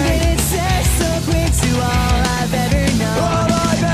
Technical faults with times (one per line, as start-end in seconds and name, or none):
none